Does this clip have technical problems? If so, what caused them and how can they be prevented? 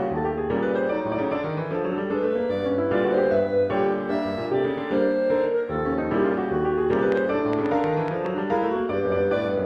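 Yes. A train of clicks runs from 6.93 to 8.27 s: about seven same-shaped pulses, unevenly spaced at roughly five per second, standing well above the sound. The matching shapes set it apart from random crackle. Likely cause: interference or a faulty connection or power supply. Keep equipment away from cables and use secure connections and a stable power supply.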